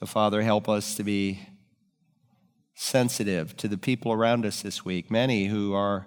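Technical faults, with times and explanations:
No technical faults are audible in this speech recording.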